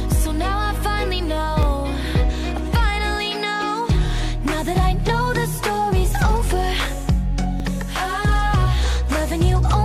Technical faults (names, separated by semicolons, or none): overlap between stream segments